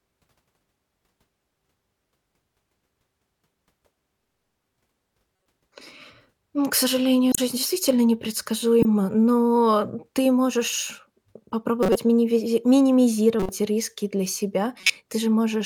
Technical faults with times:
7.32-7.38 corrupt frame decoded
8.82-8.85 corrupt frame decoded
11.83-11.98 corrupt frame decoded
13.39-13.49 corrupt frame decoded
14.80-14.90 corrupt frame decoded

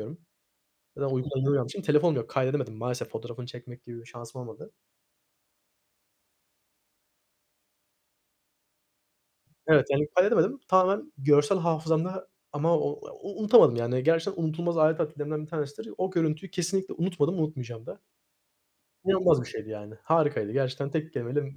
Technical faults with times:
none

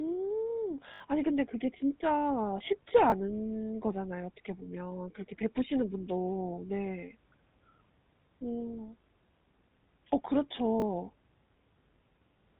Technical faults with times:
0.00-12.60 GSM full-rate codec
0.94-1.00 repeated buffer
3.10-3.12 repeated buffer
10.80 repeated buffer

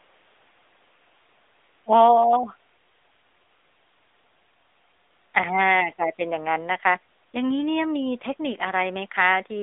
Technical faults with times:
0.00-9.62 AMR narrowband mobile codec

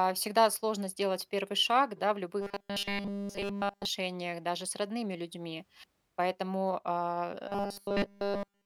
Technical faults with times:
2.41-3.85 robotic sound from repeated short buffers
7.48-8.65 robotic sound from repeated short buffers

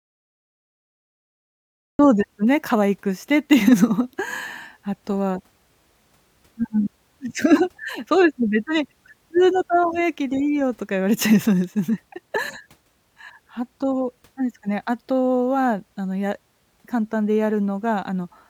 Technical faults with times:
0.00-1.99 cut-off start

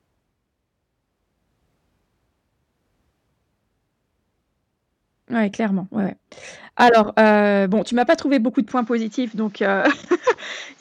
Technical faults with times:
8.72-10.81 input switched to a poorer device

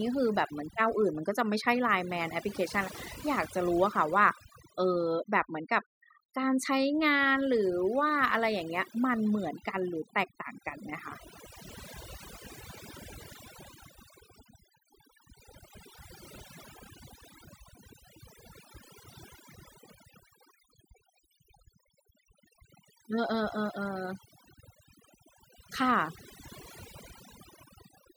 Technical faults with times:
0.00-28.16 overdone noise removal

